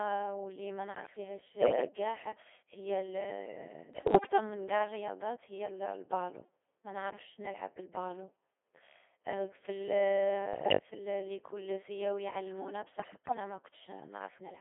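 Codec 2 vocoder, throughout: the speech is rebuilt from pitch, voicing, energy and a spectral envelope rather than the original waveform, giving a robotic, buzzy sound limited to 300 Hz to 3.5 kHz. The heavy damage fits a rate of about 2.4 kbit/s.

Bit errors on digital voice radio, at 1.60–1.88 s, 3.94–4.38 s (just before "من قاع الرياضات هي"), 10.54–10.78 s (just before "الـ ليكول سياو يعلمونا") and 13.00–13.40 s (just after it): corrupted bits scramble whole frames' parameters, so the voice jumps in pitch and level and breaks into warbling gibberish.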